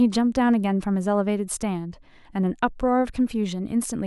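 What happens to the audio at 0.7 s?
Nothing goes wrong at 0.7 s: the speech is intact at that point, with no dropout, click or distortion.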